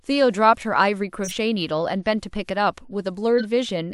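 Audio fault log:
1.24–1.32 s, corrupt frame decoded: a short chirp-like blip, about −20 dBFS at its peak, sits over the speech. Its brief length points to one damaged compressed frame. The decoder played it anyway, so misread codes put energy at wrong frequencies.
3.38–3.46 s, corrupt frame decoded: a louder burst of noise, peaking around −15 dBFS, cuts through the speech. Its length fits a couple of damaged frames. Flipped bits produced wrong gains and stray spectral energy.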